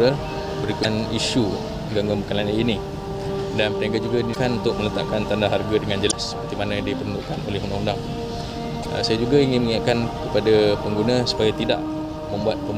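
At 0.80–0.85 s, 4.30–4.37 s, 6.08–6.13 s and 8.79–8.86 s, damaged data in a compressed stream produces brief chirps or blips: corrupted bytes make the decoder misread frames, lose sync and hunt for the next valid frame header.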